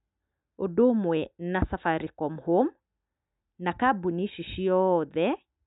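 No technical faults can be heard in this recording.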